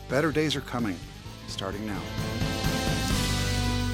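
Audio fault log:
No faults are present in this clip. Nothing in the audio calls for a log entry.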